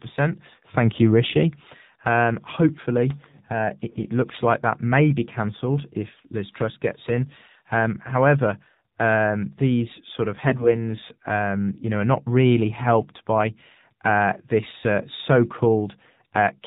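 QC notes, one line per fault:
throughout, AMR narrowband mobile codec: the speech has been through AMR-NB at a rate that sounds like 7.4 kbps, and the damage is plainly audible. Everything above 4 kHz is gone, so the voice is dull and boxy, and with few bits to spend on the excitation pulses in each frame it turns buzzy and synthetic. Background sound that isn't speech breaks up into a swirling warble.
3.89–4.09 s and 10.48–10.90 s, AMR bit errors: two bursts, the first right after "hopefully uh" and before "looks like that may", the second after "um these sort of" and before "um you know". In both, the voice keeps its pitch and loudness but goes hoarse, scratchy and gargly. Corrupted low-priority bits misplace the excitation pulses and throw off the fine pitch, gain and spectral values, while the frames are still decoded rather than concealed. The second burst is longer and rougher, which fits a noticeably higher error rate, several percent against a few percent.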